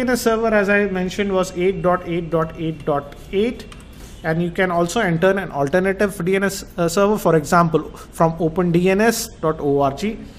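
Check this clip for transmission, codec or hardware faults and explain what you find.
No transmission, codec or hardware faults can be heard anywhere in the clip; the signal stays continuous and steady throughout.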